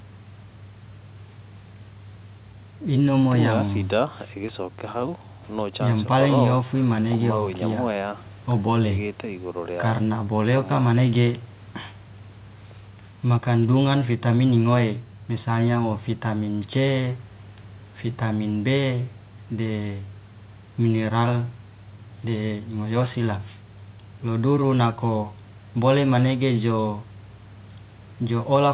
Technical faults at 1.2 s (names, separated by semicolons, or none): none